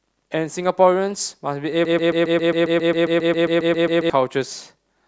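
Broken-record loop from 1.85 to 4.10 s: one 135 ms speech fragment repeats 17 times back to back, likely a stalled player resending its last buffer.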